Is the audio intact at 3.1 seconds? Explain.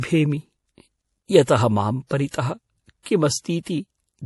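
No. The pre-echo runs from 3.03 to 3.06 s, just before 3.1 s, so the attack there arrives damaged. A short hiss of about 35 ms leads into the onset, and the attack itself sounds softened. A transform codec spreads its quantisation noise evenly across a block. When a sharp onset sits late in that block, noise sized for the loud part also spills into the quiet stretch before it.

Throughout the clip, including at 3.1 s, the speech has a plainly audible watery, swirly texture with a hard treble ceiling. Nothing is present above 11.5 kHz. The likely cause is MP3 compression at a low bitrate, which fits roughly 48 kbps. With bits that scarce, the encoder cuts the top band at a fixed frequency. It also zeroes weak frequency lines, which then flicker on and off from frame to frame, giving the swirling quality and metallic edges on sibilants.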